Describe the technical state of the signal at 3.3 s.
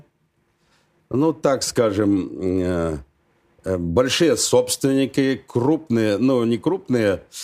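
At 3.3 s the speech signal is intact, with no dropout, clipping, glitch or other fault audible at that moment.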